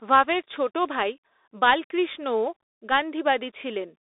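Right through the clip you get the narrow, boxy sound of the Bluetooth CVSD headset codec: the speech sits in roughly a 300 Hz to 3.7 kHz band, nothing above 3.8 kHz, with plainly audible coarse one-bit coding damage.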